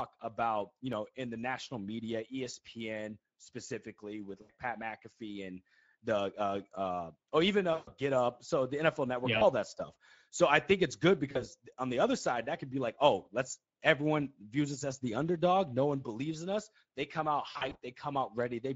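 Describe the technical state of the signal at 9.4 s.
At 9.37 to 9.43 s, about 40 ms, VoIP packet loss concealed by the speech codec: the decoder extrapolates its last pitch and filter, stretching the sound out as it fades, and the voice stays weak briefly afterwards. Underneath, the Speex codec's plainly audible hoarse, noisy coding persists, consistent with a middle setting near 16.8 kbps.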